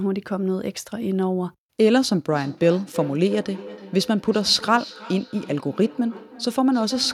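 From 2.3 s to the end at 7.13 s, the speech returns on itself at a fixed gap of roughly a third of a second, each repeat thinner and more ringing, the strongest about 18 dB below the speech. This is feedback echo between two devices: two devices in the same room share the call, one plays what the other's microphone sent, that microphone captures it again, and each echo canceller removes only its own device's playback.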